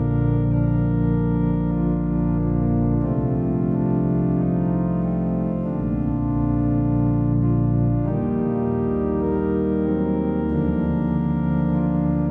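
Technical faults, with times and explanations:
No technical faults can be heard in this audio. Nothing interrupts or disturbs the sound at any point, so there is no time to mark.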